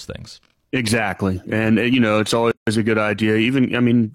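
At 2.51 s, right after "uh you know it's", the speech drops out for about 160 ms and picks up again at 2.67 s with "a good". That's a gap at a join of encoded pieces. The audio was encoded in separate chunks and butted together untrimmed, so the encoder's start-up delay and end-of-frame padding are left sitting in the middle. You hear a hole with its edges smeared by the codec, and the speech resumes exactly where it stopped.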